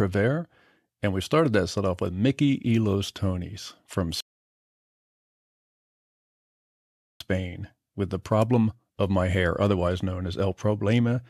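A speech recording with one rebuffering stall. At 4.21 s the sound drops to silence. It stays silent until 7.21 s, a gap of 3 seconds. Then the speech picks up exactly where it broke off. Nothing is skipped or repeated. The playback ran out of downloaded audio and had to wait for more data before continuing. The stall loses no content. It only adds 3 seconds of dead air to the timeline.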